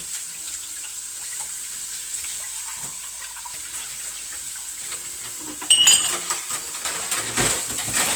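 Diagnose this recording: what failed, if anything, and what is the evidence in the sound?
Opus compression, throughout the clip, at the codec stage: tones sound grainy and rough rather than swirly, while content reaches up to about 20.5 kHz. The encoder likely ran in its music mode at a low rate, near 24 kbps, filling starved bands with noise.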